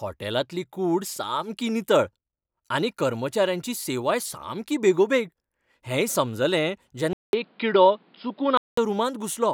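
Speech clip: after "सामकी बेगोबेग हेंय समजलें", a 200 ms dropout at 7.13 s precedes duller audio capped near 5.1 kHz until 8.77 s, likely an input switched to a poorer device.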